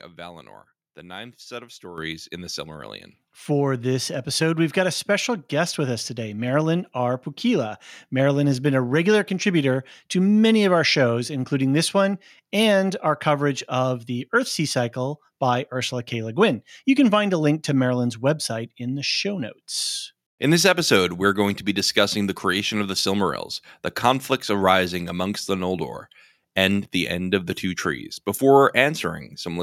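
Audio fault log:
1.98 s, microphone volume stepped up: the input gain jumped about 9 dB in one step after "the ninth set of", so voice and background suddenly rise together.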